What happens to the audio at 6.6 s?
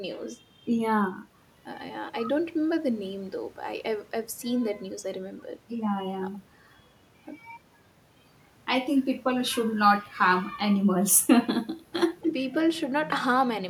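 Nothing goes wrong at 6.6 s; the speech carries on intact through that moment.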